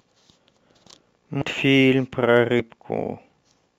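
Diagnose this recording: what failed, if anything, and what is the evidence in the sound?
Sample clock jitter at the converter: a faint roughness runs throughout, riding about 40 dB under the speech, fitting timing wobble of around a microsecond and a half.

Compressed frames skipped, at the codec or storage stage: jumps at 1.41 s and 2.59 s, where roughly 200 ms and 150 ms of speech vanish, consistent with whole 20 ms frames dropping.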